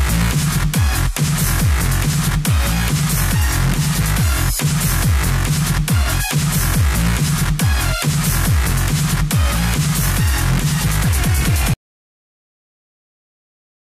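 An audio dropout to silence begins at 11.74 s and runs to the end of the clip, about 2.2 s in all. The sound cuts off mid-flow and falls to silence, with no room tone or noise floor underneath, so whatever followed is simply missing. The likely cause is a lost input, such as a disconnected device, a failed link or a mute, while the recorder kept writing silence.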